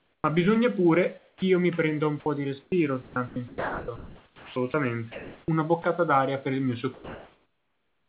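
Speech, carried over a call path that leaves nothing above 4 kHz, which fits a narrowband G.711 link. Comfort noise in place of the background fills 0.00 to 0.24 s, 1.18 to 1.42 s and 6.94 to 8.08 s: a steady, featureless hiss, about 25, 11 and 3 dB quieter than the real room noise, likely generated while discontinuous transmission paused sending. The onset is clipped by the voice detector at 0.22 to 0.24 s and at 1.38 to 1.42 s, just before "mi prenda un po'". About 20 ms and 40 ms of the start are missing, so sound begins abruptly, likely because the detector reacted late. Sound is chopped by the voice detector from 2.62 to 5.84 s, between "prenda un po' di" and "d'aria per il mio". Roughly 1.7 s in total is swapped for synthetic fill, so the audio breaks up, likely from the detector toggling transmission repeatedly.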